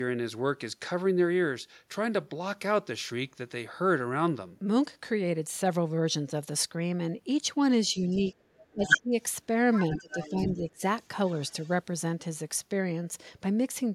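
The echo canceller likely failed to separate near-end from far-end during double talk, so speech suppressed in double talk pulls the speech down: a slight dip at 7.93 to 7.97 s, then deep drops of around 20 dB from 8.21 to 9.13 s and from 9.98 to 10.81 s. Residual echo also likely escaped cancellation, so the other side's voice leaking through appears faintly from 7.99 to 8.34 s, louder than the speech itself at 8.85 to 8.98 s, noticeably at 9.73 to 10.44 s, and barely audibly at 11.03 to 11.08 s and 11.27 to 11.72 s.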